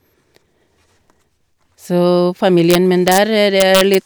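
Around 2.71 to 3.18 s, and again from 3.60 to 3.95 s, the speech hits integer overflow. The gain pushed peaks past the largest integer (by about 1 dB in the first stretch, about 2 dB in the second), and instead of being limited they wrapped round to the opposite sign. Each peak flips right across the full range, so you get violent cracks on the loud parts, much harsher than ordinary clipping.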